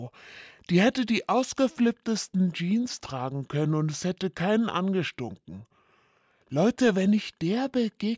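From start to finish the audio sounds slow and low, dragging at about 0.73 times its proper speed and sitting about 5.5 semitones flat. This is a wrong sample rate fault, consistent with material recorded at 22 kHz being played back at 16 kHz without conversion.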